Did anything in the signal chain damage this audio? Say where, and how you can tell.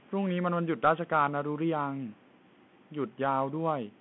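Yes. At the codec stage, the Bluetooth CVSD headset codec runs throughout. Nothing gets above 3.9 kHz, sibilants turn scratchy where loud high sounds outrun the one-bit up/down steps, and grainy hiss sits underneath.

At the call-processing stage, there's an echo leak from 2.14 to 2.37 s. A very faint copy trails by 196 ms, likely a far-end echo canceller letting loudspeaker pickup through.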